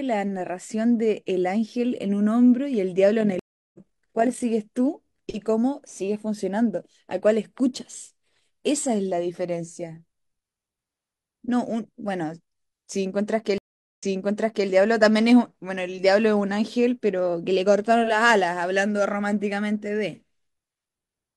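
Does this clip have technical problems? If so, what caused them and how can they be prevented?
Yes. From 3.20 to 4.44 s, overlap-add ripple makes the level flutter by about 6 dB at roughly 40 Hz, because the reassembled frames' overlap doesn't sum to constant gain. The waveform envelope shows regular scalloping. Using analysis and synthesis windows that satisfy the constant-overlap-add condition for the chosen hop size prevents this.

A stream reconnect at 3.39 to 3.79 s leaves 0.34 s of silence, then the speech resumes roughly 0.3 s later. Another at 13.58 to 14.68 s leaves 0.40 s of silence, then jumps 0.70 s back and repeats material. Both appear as a flat waveform gap and a blank spectrogram band with a soft onset afterward. A larger client buffer with seamless resume, or a more stable connection, prevents these dropouts.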